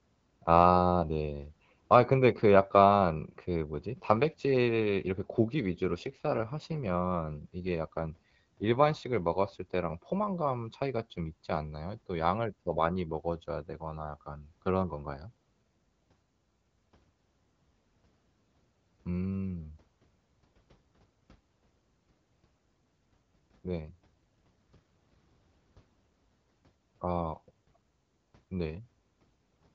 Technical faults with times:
5.84-8.84 AMR rate drop
24.04-24.78 AMR rate drop

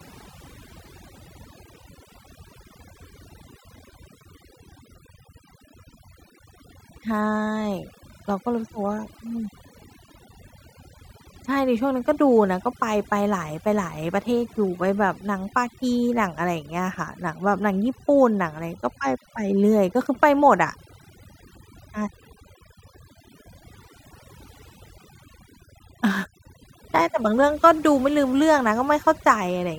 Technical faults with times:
0.00-29.78 overdone noise removal

